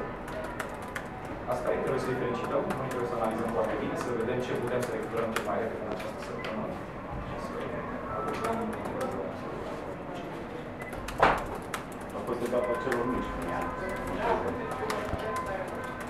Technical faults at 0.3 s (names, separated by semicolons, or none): none